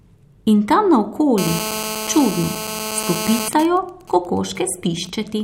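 A hard, raspy buzz cuts in at 1.38 s and runs steadily until 3.48 s, sitting only about 7 dB below the speech. Its fundamental is 217 Hz, topped by a dense stack of harmonics, and it has no relation to what is being said. This is GSM phone buzz. A 2G handset close by was in a call, transmitting bursts 217 times per second, and the audio circuitry was demodulating those radio pulses into the signal path.

From 3.53 s to 5.10 s the continuous buzz gives way to a pattern of even ticks with a longer 217 Hz buzz twice a second, much quieter at around 20 dB under the speech. These are GSM signalling bursts. The same phone was still in the call, but its user had gone silent, so it sent only short groups of bursts instead of a continuous stream. The circuit rectified each group into a separate click or buzz.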